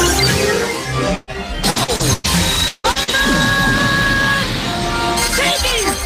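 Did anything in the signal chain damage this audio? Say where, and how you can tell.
Yes, the damage is in the network stage of the call.

Repeated packet loss (robotic sound): between 1.15 and 2.26 s, six packet gaps, the longest 120 ms, were patched by continuing earlier sound. About a third of that span is concealed, so it sounds choppy.

From 2.68 to 2.87 s the sound turns into a continued, fading buzz or hiss for 160 ms, then about 40 ms of silence before it resumes. This is likely a long network dropout.

Lost packet rebuilt from error correction: single 20 ms packets at 2.84, 2.95 and 3.08 s were replaced by low-bitrate copies carried in following packets. These frames sound rougher and noisier but leave no gap.

Short concealed packet loss: roughly 40 ms holes at 2.92–2.98 s and 3.03–3.11 s were filled by extrapolating the preceding sound. Each one leaves a brief smear or wobble.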